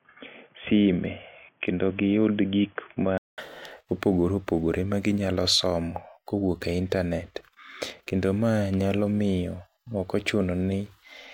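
From the very start up to about 3.38 s the speech sounds narrow and boxy, with nothing above 3.4 kHz and a faint new noise floor, roughly 40 dB down, at about the same loudness as what follows. That's most likely the input switched to a poorer device, like a headset's call profile. At 3.38 s there's a 200 ms gap, and then the full band comes back and everything opens up.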